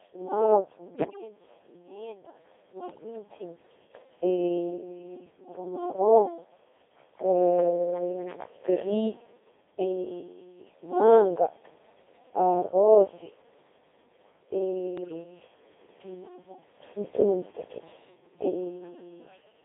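Speech that has been through a very low-rate Codec 2 vocoder for its full length. The encoder sent only pitch, voicing, energy and a spectral envelope, and the decoder rebuilt the voice from sine waves rather than keeping the waveform. The heavy, buzzy, robotic character fits a rate near 2.4 kbit/s, and the band runs from about 250 Hz to 3.6 kHz. On top of this come bit errors on digital voice radio at 0.94 to 1.22 s, 2.90 to 3.04 s and 14.98 to 15.24 s. Corrupted bits, roughly one in ten in the first two bursts and about one in twenty in the last, reached the vocoder's frame parameters. As a result the synthetic voice jumps in pitch, level and tone colour and breaks into warbling, bleeping gibberish.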